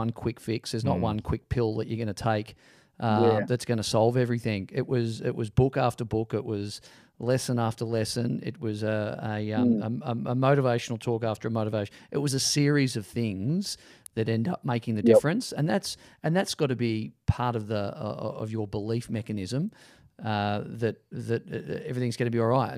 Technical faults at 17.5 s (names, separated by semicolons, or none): none